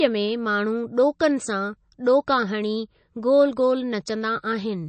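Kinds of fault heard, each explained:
MP3 compression: The speech sounds watery and swirly all the way through, and the top end stops dead at about 8.3 kHz, so sibilance sounds dull and clipped off. That's likely a starved MP3 encoder, and the damage fits a low bitrate of about 32 kbps. Short of bits, it chops the treble at a fixed cutoff and drops quieter frequency lines, which flicker in and out between frames and give that underwater shimmer.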